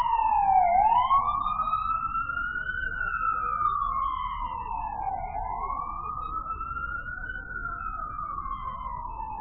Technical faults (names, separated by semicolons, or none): MP3 compression